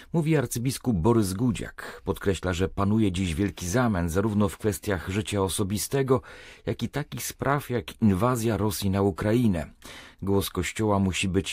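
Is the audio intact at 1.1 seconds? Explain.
Yes, the audio is intact at 1.1 seconds, with no fault audible at that moment.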